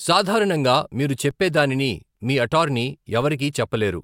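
At 1.31 s the waveform's zero line jumps abruptly, a DC step of about −32 dBFS, as if an input carrying an offset had been switched in or the converter had recalibrated. The sudden shift in baseline is heard as a single low thump. The offset does not hold: it bleeds away as a 20 Hz high-pass response pulls the signal back toward zero. The speech itself continues unchanged through the event.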